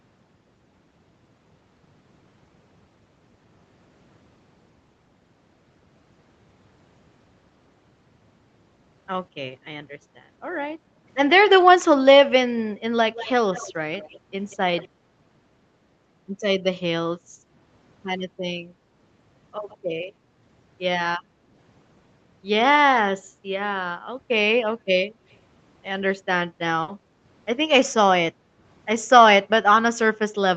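Faint delayed repeats of the speech, likely an echo leak from a far-end loudspeaker the echo canceller did not fully remove, appear at 13.11, 13.53, 13.98, 14.51, 14.77, 19.69 and 25.32 s. They trail the original by 183 ms, then 160 ms, and fade from fairly audible to barely there.

At 26.82 to 26.91 s a burst of packet loss is concealed by extending the last sound for 60 ms before it fades. Another 60 ms of speech is skipped when audio resumes.

From 28.33 to 28.58 s the background is gated by the echo canceller. The room sound dips by about 7 dB for roughly a third of a second, then returns.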